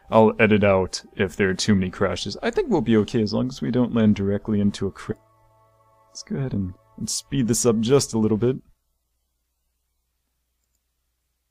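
At 5.11 s the audio lurches forward with no gap, joining two points that were about a second apart in the original. This is a skip ahead: that stretch was dropped in transit or discarded by an overflowing jitter buffer while later audio waited. Right afterwards the sound turns hurried but keeps its pitch, running at 112% speed from 5.21 to 6.07 s and at 109% from 6.92 to 9.44 s. This jitter buffer speed-up happens because the receiver held more audio than its target and trimmed many short pitch-period slices to reduce delay, removing roughly a tenth and then a fifth of a second.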